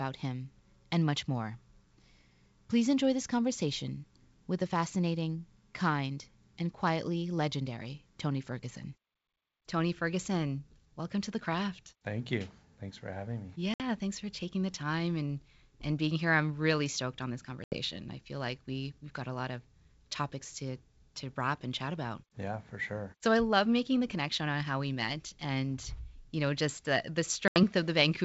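Speech on a wideband call, clear up to about 7 kHz. Packet loss on an ADPCM call cuts three hard-edged silent holes. One of about 60 ms comes at 13.74 s after "for having me". Others of 80 ms come at 17.64 s after "really stoked on this" and at 27.48 s after "know just the the". Each hole is a few packets. The decoder's predictor and step size then disagree with the sender's, so sound resumes slightly distorted before settling.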